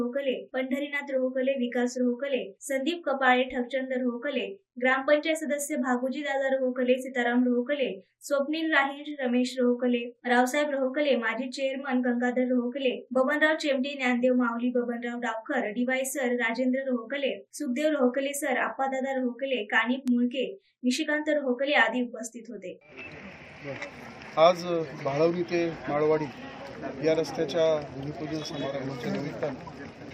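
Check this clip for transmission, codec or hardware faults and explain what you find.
Three bit error spikes are audible, at 9.11 s, 11.61 s and 20.08 s. Each is a single sharp tick that bears no relation to the surrounding sound. A flipped bit shifted a sample value by a power of two and it snapped straight back, which points to one corrupted sample at 9.11 s and a short run of a few at the other two. Peaks reach about −32 dBFS, and about −20 dBFS at 20.08 s. Unlike a dropout click, there is no gap or muted stretch.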